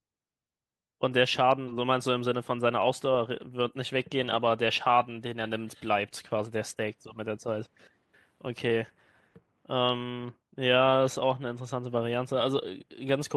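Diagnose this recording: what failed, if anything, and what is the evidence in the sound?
The failure sits in the network and jitter buffer stage. At 1.67 to 1.69 s the speech has a skip ahead. Playback lurches forward with no gap and no fill. Something like 400 ms of speech is gone, and the two sides are butted together almost directly. The jump is audible as an abrupt discontinuity in the flow. Later audio was already queued, so the stretch was dropped and playback moved straight on.

Right after, from 1.77 to 2.88 s, comes a jitter buffer speed-up. The speech runs at 107% of normal rate. Pitch stays the same, but the delivery sounds hurried. The buffer held more audio than its target, as happens when delayed packets arrive in a burst. To shed the excess, the receiver cut many short pitch-period pieces in a row, trimming roughly a tenth of a second overall.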